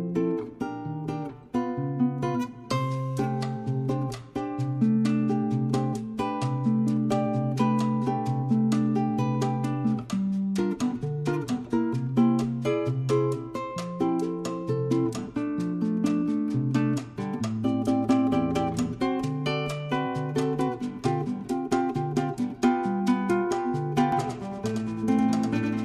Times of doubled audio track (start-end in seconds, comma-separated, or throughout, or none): 24.12-25.85